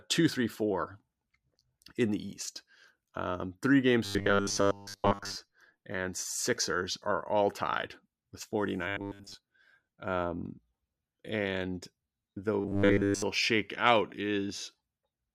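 Audio likely arrived too seldom, so short 10 ms buffers were replayed, giving robotic sound from repeated short buffers: a rigid 100 Hz metallic buzz over the speech at 4.05–5.36 s, 8.88–9.35 s and 12.60–13.22 s, with most of the audio in those spans replaced by repeats.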